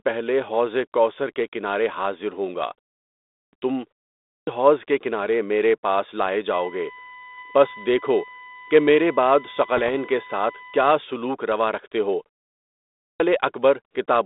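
At 3.26 s, right after "کے کنارے حاضر ہونگا", comes the first clipped start after a pause. The pause before it lasts about 0.54 s. The output device appears to go idle in that silence. It needs time to wake and lock again. About 0.27 s of the next sound is lost, so speech starts abruptly. The same happens at 4.2 s, after a 0.35 s pause, just before "حوض کے کنارے میرے". Again about 0.27 s is swallowed.

From 6.53 s to 10.93 s, between "کنارے میرے پاس لائے" and "سلوک روا رکھتے ہو", a USB whine sits under the speech. It is a steady tone built on 1 kHz. Its strongest component is at 2 kHz. It runs at about 20 dB below the speech. The bus's 1 ms frame timing leaks through the power or ground as this fixed pitch.

From 9.77 s to 9.99 s there are bit errors on an ADPCM link. They fall inside the whine. A small fraction of bits were flipped on the G.726 link, which runs at 32 kbit/s over a 250 Hz to 3.7 kHz band. 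Each error throws off the decoder's step size and prediction. The damage rings on briefly. It is heard as pops and rough bursts, with quick jumps in level.

At 12.93 s, after a 0.71 s pause, there is another clipped start. About 0.27 s of the opening sound is cut away.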